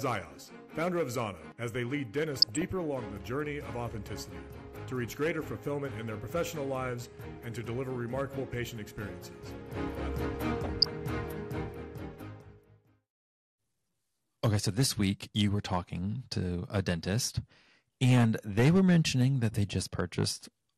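Throughout, the audio has been squeezed through MPEG Layer II coding at a rate that fits roughly 80 kbps, which is likely too few bits for the material. With the budget that tight, the encoder shuts off upper sub-bands and quantises the remaining ones coarsely, so this MP2 compression is plainly audible: the top end sounds dull and flickers in and out, and a gurgling, grainy roughness sits over everything.

At 2.37 to 2.64 s, 10.64 to 10.87 s and briefly at 19.69 to 19.74 s, bit errors of a fraction of a percent slip past error correction into the coded stream, producing DAB burbling. Corrupted samples put short blips of noise into single sub-bands, and corrupted scale factors make sub-bands jump in level for up to a frame. The first two bursts span a run of frames, while the last is much shorter.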